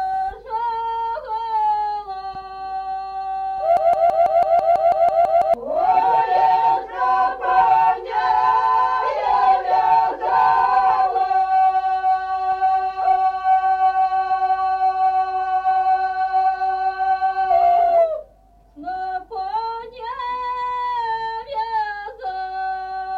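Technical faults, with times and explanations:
3.77 to 5.54 s, broken-record loop: a 165 ms slice of sound repeats back to back eleven times, like a stuck needle. The player or stream likely stalled and kept resending its last fragment, so whatever belonged in that stretch is gone.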